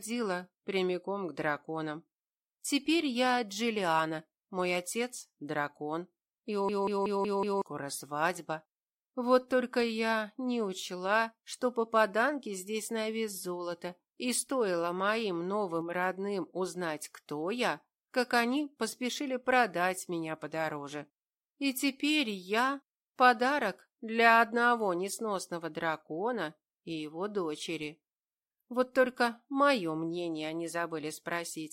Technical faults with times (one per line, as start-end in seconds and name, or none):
6.69-7.62 system hang loop